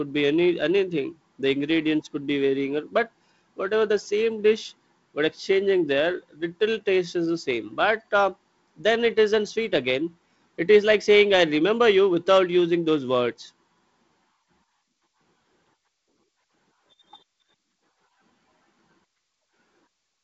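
The speech carries no technical faults: it comes through a G.722 wideband telephone path whose band stops at about 7.7 kHz, with the light upper-band hiss and slightly noisier lower band that suggest the 48 kbit/s mode.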